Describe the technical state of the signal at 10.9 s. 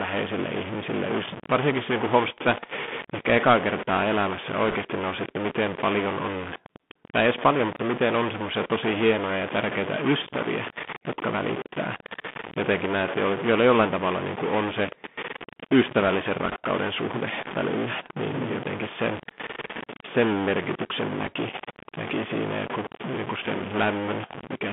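At 10.9 s the speech carries two faults, both present for the whole clip rather than at that moment alone.

The first is grainy noise or buzzy distortion on the speech, with a gritty noise floor in the pauses instead of silence. The likely cause is a stuck bit: one bit of each sample held at a fixed value by a faulty line or converter, so roughly half of the samples are pushed off by that bit's weight. Because the error follows the waveform, it turns into distortion tied to the signal. Quiet passages fill with noise where small values cross zero.

The second is the Bluetooth CVSD headset codec. The audio is confined to a narrow line band of about 150 Hz to 3.5 kHz, which fits a 64 kbps CVSD stream. That codec sends one up-or-down bit per sample, with an adaptive step size. The damage is plainly audible: loud, bright sounds outrun the step and smear, s sounds come through scratchy, and a granular hiss runs beneath the speech.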